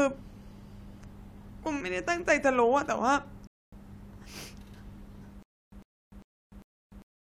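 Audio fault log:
3.47–3.73 s: rebuffering stall. The speech cuts to silence for 0.25 s, then resumes exactly where it stopped. The player ran out of downloaded audio and paused until more arrived. Nothing is lost, but that quarter second is added.
5.43 s to the end: stutter with silent gaps. A 0.1 s fragment returns four times, every 0.4 s, with 0.3 s of digital silence between. The stream likely stalled, replaying its last fragment at each retry before running empty. The speech meant for this span is lost.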